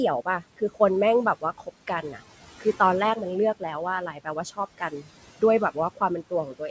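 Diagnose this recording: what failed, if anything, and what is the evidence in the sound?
Noise suppressor artifacts, from the call-processing stage, run through the whole clip. The room noise sinks by about 16 dB between phrases and swells back under the speech. Untouched room noise would sit at a steady level instead of following the speech like this.

Speech cut by the noise suppressor occurs at 0.25–0.8 s, 1.41–2.2 s, 4.07–5.08 s and 5.74–6.7 s. Soft sounds and phrase endings are pulled down by about 13 to 17 dB, a fraction of a second within each span, so they sound swallowed. Unlike packet loss, nothing clicks or goes fully silent.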